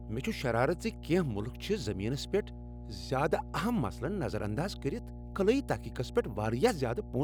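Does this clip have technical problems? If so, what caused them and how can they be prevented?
Yes. A ground loop or nearby transformer is letting the 60 Hz power line leak into the signal path, producing mains hum throughout the speech: a steady low drone with some low harmonics, sitting only around 10 dB below the speech level. Prevent it by breaking ground loops with balanced cables or isolation, and keeping audio lines away from power supplies.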